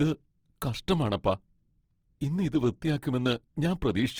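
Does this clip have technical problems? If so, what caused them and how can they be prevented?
Yes. All the way through, the speech has a grainy, rough, noisy texture, though the top end stays full out to about 20.4 kHz. That points to Opus compression, likely in its music mode at a low bitrate around 16 kbps, patching starved bands with folded or noise-filled content. To prevent it, encode at a higher bitrate or let Opus use its speech mode for voice.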